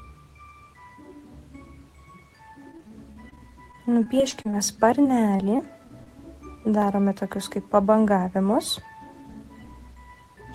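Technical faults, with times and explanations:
2.71–4.55 s, repeated packet loss (robotic sound): twelve short gaps, the longest 38 ms, each bridged by stretching the preceding sound, giving a choppy texture with pieces missing.
4.2 s, dropped buffer (overrun): an abrupt jump forward, likely from about 20 ms of samples overwritten before being read, leaving the two sides spliced together.
5.03–6.08 s, repeated packet loss (robotic sound): five gaps, the longest 27 ms, patched by continuing the last sound, so the audio turns briefly choppy again.
6.82 s, dropped buffer (overrun): a smaller skip, roughly 10 ms gone, with the audio joined directly across the missing piece rather than falling silent.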